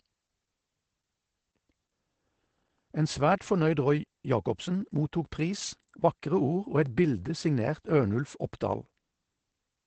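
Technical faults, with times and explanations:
Throughout: Opus voice compression. Nothing is heard above about 8.7 kHz, and the sound is muffled, hoarse and faintly robotic from coarse linear-prediction coding, which points to SILK at around 12 kbps. That grainy texture sets it apart from simple low-pass filtering.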